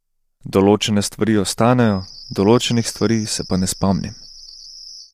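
From the start, the speech carries plainly audible codec damage, likely from low-delay AAC compression at a rate that fits about 32 kbps. Voices sound rough and grainy, with noise filling the gaps between harmonics. A spectrogram shows smeared, speckled energy between harmonic lines and a thinned top band.

From 1.78 s to the end, a feedback whistle holds at 5.2 kHz, around 20 dB below the speech. The loudspeaker-to-microphone loop likely sits just short of howling. It is heard as a thin tone at one pitch that swells and fades slowly in level, and a spectrogram shows one unbroken horizontal line.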